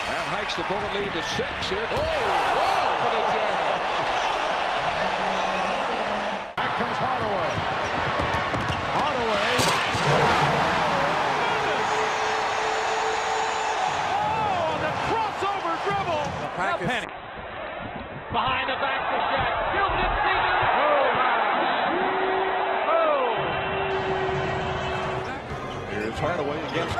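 At 17.05 s a call bitrate drop sets in and lasts to the end: the encoder is starved of bits, so audio bandwidth collapses from 20 kHz to 4 kHz and coding turns coarse, sounding muffled and watery, consistent with roughly 48 kbps falling to 7 kbps. A spectrogram shows everything above 4 kHz vanishing.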